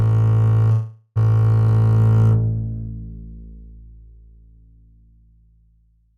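A call audio freeze runs from 0.71 to 1.18 s. The music halts and its last sound is held as a fading buzz for 444 ms, then resumes where it stopped, nothing lost but everything after delayed. Delayed packets likely drained the jitter buffer.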